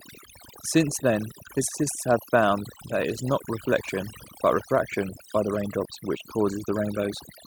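Overdone noise removal runs throughout: aggressive reduction cuts frequency bands near the noise estimate, leaving near-silent, twinkling gaps and taking quiet parts of the speech with them.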